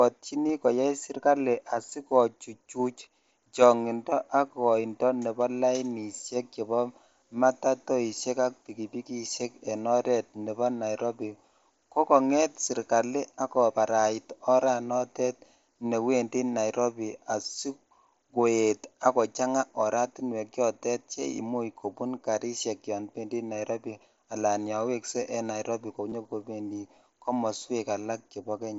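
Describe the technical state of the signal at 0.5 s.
At 0.49 s there is a brief concealed Bluetooth headset packet loss, about 15 ms, which fits two lost packets. The receiver repeats the best-matching recent stretch of waveform, leaving a short periodic patch with a slight discontinuity on the waveform and smeared, repeated harmonics on a spectrogram, within the mSBC band up to 8 kHz.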